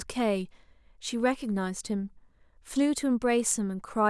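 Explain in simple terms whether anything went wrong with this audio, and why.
Nothing went wrong; this speech recording sounds fine throughout.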